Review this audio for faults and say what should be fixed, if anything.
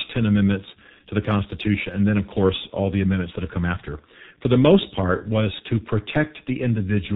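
G.723.1 codec damage runs through the whole speech clip. Energy stops dead at 4 kHz on a spectrogram, consonants smear, and the voice sounds hoarse and muffled, consistent with roughly 6 kbit/s coding. To prevent it, carry the call over a wideband codec at a higher bitrate instead of G.723.1.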